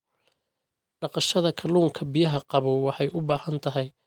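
At 2.25 to 2.43 s and 3.09 to 3.43 s, lost packets were rebuilt from error correction: low-bitrate redundant copies fill the gaps, so the speech continues without dropouts but sounds rougher and noisier.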